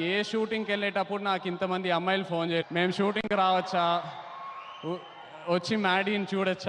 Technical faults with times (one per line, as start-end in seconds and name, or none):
none